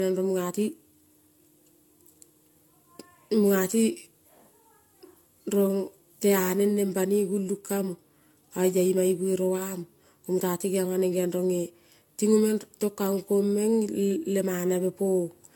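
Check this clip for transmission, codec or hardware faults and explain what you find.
One codec fault runs through the whole speech recording: generation loss, likely from repeated lossy coding.

From start to finish the speech sounds swirly, smeared and hollow, with softened consonant attacks and nothing above 17 kHz. The character points to AAC-LC at around 96 kbit/s applied about four times. Each decode and re-encode quantises on a shifted frame grid, so noise and spectral holes pile up. A single encode at that rate would sound cleaner. The damage is worse than the bitrate alone would explain.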